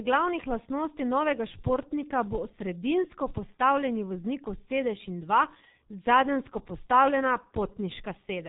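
Throughout, heavy G.723.1 codec damage leaves the spectrogram blank above 3.8 kHz. The speech sounds muffled and hoarse, with smeared consonants, which fits a bitrate near 6 kbit/s.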